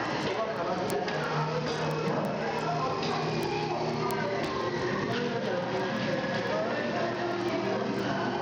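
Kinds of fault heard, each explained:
Gain pumping: the gain swings by roughly 10 dB, so loud and soft parts end up closer in level and the sound is squashed, likely a fast limiter fighting gain set far too high.
Bluetooth SBC compression: the treble flickers and a gritty haze rides on the sound, likely SBC at a low bit pool, consistent with roughly 80 kbps.
Word clock ticks: around fifty sharp ticks of uneven strength, about one every 0.15 s, from an unlocked receiver clock slipping a single sample each time, roughly 150 ppm off.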